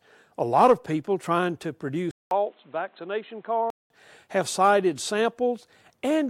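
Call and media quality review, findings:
Speech turns dull and boxy at 2.11 s, after a 200 ms gap. Nothing above 4.1 kHz. Level drops about 5 dB. New noise sits roughly 35 dB down. Full band returns at 3.90 s. Likely input switched to a poorer device.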